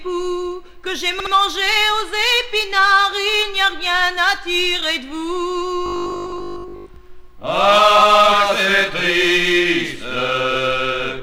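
At 1.20 to 1.33 s the audio stutters as a 64 ms block of repeated frames plays two extra times. The duplicated compressed frames add 128 ms to the running time. From 5.86 to 6.96 s the sound turns into a rigid metallic buzz at 50 Hz, most likely robotic sound from repeated short buffers. The pitch fits a 20 ms buffer replayed while most of the real audio in that span is skipped.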